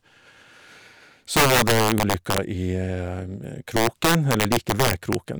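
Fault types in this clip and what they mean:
Integer overflow: in two stretches of this speech, 1.37 to 2.38 s and 3.77 to 5.15 s, the signal is pushed about 8 dB and about 7 dB past full scale, and instead of being held at the limit the loudest peaks wrap around to the opposite extreme. Each wrap is a harsh crack far sharper than clipping. On a waveform, peaks jump abruptly from top to bottom. A spectrogram shows bright vertical broadband streaks at each jump.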